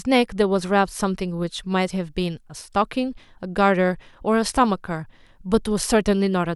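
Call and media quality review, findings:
No audible faults found in this speech clip on review; no symptoms to attribute to any component.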